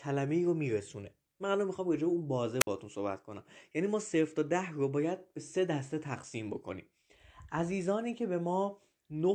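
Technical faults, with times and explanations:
2.60 to 2.67 s, wireless microphone squelch dropout: the radio link from the mic fades for a moment, so there's a short swell of hiss as the signal weakens, then the receiver's squelch decides the carrier is too weak and mutes its output outright, leaving a hole of near silence about 55 ms long before the link recovers and the speech comes straight back. That brief gate closing is what makes it sound like a clean gap.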